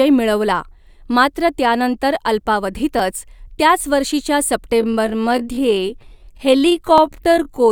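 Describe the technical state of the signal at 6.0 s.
At 6.0 s the signal sits inside a time-stretched section running from 4.73 s, just after "त्याच वर्षीच्या", to the end at 7.71 s. Playback there runs at about 0.62 times normal pace, likely from software lengthening the audio while holding pitch by repeating short segments. The pace drops abruptly with pitch unchanged, leaving the speech dragging.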